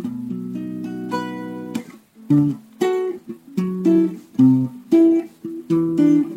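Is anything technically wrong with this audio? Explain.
No, nothing technical stands out here; the sound comes through without any glitches or problems to point to.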